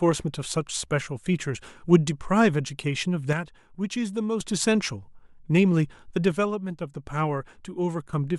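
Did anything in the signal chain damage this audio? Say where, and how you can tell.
Yes: a channel drops out from 3.33 to 4.40 s and 6.32 to 8.13 s; the speech falls abruptly by about 6 dB after mono summing, likely a failing analogue connection.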